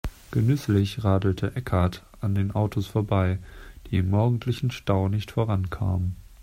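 No technical faults are audible.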